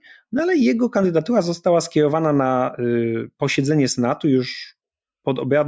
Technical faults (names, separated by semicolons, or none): none